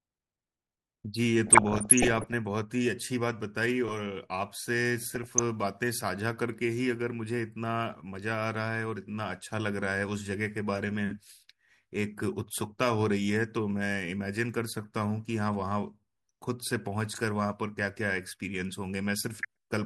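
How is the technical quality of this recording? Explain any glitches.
The speech is marred by DAB burbling in three places: 1.47 to 2.34 s, 4.99 to 5.42 s, and briefly at 19.35 to 19.45 s. Weak reception let bit errors slip past error correction into the MP2 audio. Corrupted samples put short blips of noise in individual sub-bands, and corrupted scale factors make sub-bands jump in level for up to a frame. The result is blips of noise and sudden level jumps over the speech. The last burst is short but has the heaviest error rate there, about 1%.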